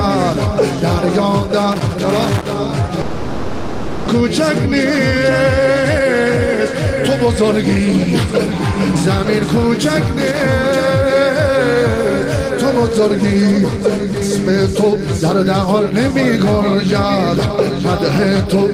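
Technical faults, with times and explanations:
1.72–2.53 s and 10.19–10.45 s, loose connector crackle: irregular bursts of scratchy crackle, from a worn contact rapidly making and breaking and chopping the signal.
3.01–4.10 s, long network dropout: the last sound drags on as a fading buzz for about a second, then resumes with roughly 0.6 s of audio gone, likely because packets stopped arriving.
4.14–9.69 s, 10.63–11.75 s and 12.70–14.58 s, jitter buffer speed-up: the sound runs faster at unchanged pitch, about 4 to 6 percent fast. After the backlog, the receiver cut out repeated pitch-period slices, roughly 0.3 s in the first stretch.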